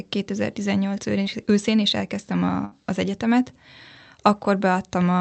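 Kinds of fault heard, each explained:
Short concealed packet loss: About 20 ms of the call arrived too late to decode, around 1.23 to 1.27 s, just before "őszén és elkezdtem". The receiver stretched the preceding sound to bridge the hole and then blended back. It is heard as a brief smear or wobble in the speech.
Burst of packet loss: A longer run of audio went missing, from about 2.65 to 2.73 s, between "őszén és elkezdtem" and "az egyetemet". The receiver continued the last sound for roughly 64 ms and faded it down. Speech then resumes slightly further on, with that stretch lost.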